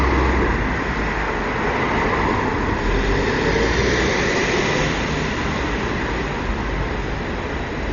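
Dull sound throughout, nothing above 7 kHz, with rough fluttering noise around tones, likely heavy Dolby Digital compression at a starved bitrate, consistent with roughly 40 kbps.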